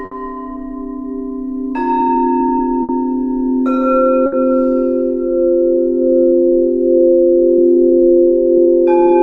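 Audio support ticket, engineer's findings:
Clock drift between sender and receiver, whole clip. Sender clock roughly 5% slow against receiver. Jitter buffer keeps draining, producing recurring timing hiccups at uneven spacing. Distinct from network jitter: errors all lean one way, buffer always short, never overfull.

Short stall from a late packet at 0.05–0.13 s, 2.83–2.91 s and 4.26–4.34 s. Buffer underrun, receiver holds last sound 60 ms until packet lands, then resumes in place. Nothing lost, so unlike packet loss concealment: no gap or skip, just a brief held sound and a 60 ms delay step.

Repeated timing corrections, 1.12–9.11 s. Receiver repeats small pieces to cover the slow sender, playback stretched to 96% speed, adding about 0.3 s overall. Unlike the stalls: many tiny unevenly spaced edits, heard, if at all, as unsteady tempo rather than distinct held sounds.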